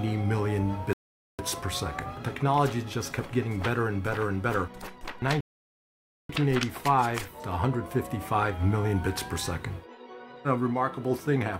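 Rebuffering stalls interrupt the audio at 0.93 s and again at 5.41 s. Each time the player exhausts its downloaded audio and halts until more data arrives: the sound drops to silence, then picks up exactly where it stopped, with nothing skipped. The first gap lasts until 1.39 s, adding about 0.46 s; the second runs to 6.29 s, adding about 0.89 s. The result is a dead pause followed by seamless continuation.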